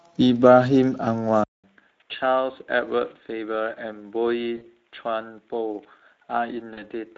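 Throughout the speech, Speex codec damage is plainly audible: a hoarse, grainy roughness sits on every voiced sound, as the CELP coder runs short of bits for the excitation. The character points to a middle setting near 16.8 kbps. Unlike a band limit, it roughens the texture rather than dulling it.

At 1.44 s the sound cuts out for about 200 ms and returns duller and boxier, with nothing above 3.8 kHz, around 10 dB quieter and with a faint new background noise. This is likely an input switched to a poorer device. Codec damage sounds the same from the first moment, but this one is a sudden step that lasts to the end.

At 4.57 s and again at 6.73 s, VoIP packet loss concealed by the speech codec replaces about 40 ms with a fading extension of the preceding sound, and the voice stays weak briefly afterwards. A plain dropout would leave a gap instead.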